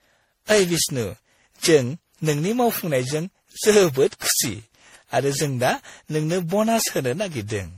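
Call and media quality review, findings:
Generation loss, throughout the speech. Symptoms: swirly, hollow timbre, smeared consonant attacks, nothing above 17.2 kHz. Likely cause: repeated lossy re-encoding, sound fits around ten passes through a 64 kbit/s MP3 chain. Each pass requantises on a shifted frame grid, so noise and spectral holes accumulate beyond what one encode would leave.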